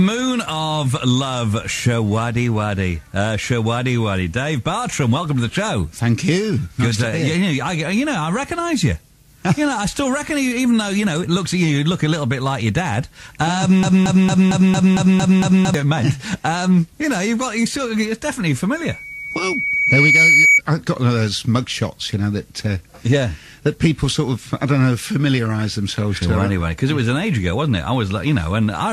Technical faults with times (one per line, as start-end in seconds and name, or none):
13.83-15.74 broken-record loop
18.75-20.61 loudspeaker feedback squeal